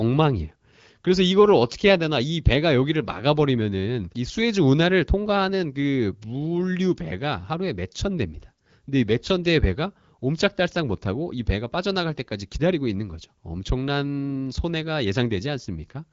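No faults can be heard in the speech, which runs over the AMR wideband (HD Voice) codec at 12.65 kbit/s with nothing above 7.4 kHz.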